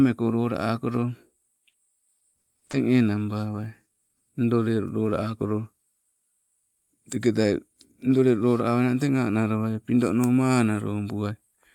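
A speech clip with a run of repeated packet loss, giving it that robotic sound between about 1.69 and 2.75 s. Over that second the audio keeps dropping out in short holes, the longest around 60 ms, and each one gets patched by stretching the last bit of sound forward. That concealment covers about a fifth of the stretch, roughly 200 ms in total, which is why it comes across choppy.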